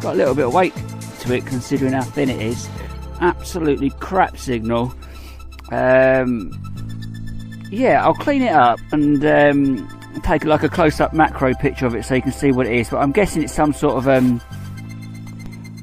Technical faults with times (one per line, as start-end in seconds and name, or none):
2.92-2.96 corrupt frame decoded
4.84 corrupt frame decoded
7.03 corrupt frame decoded
10.27 DC step
15.46 DC step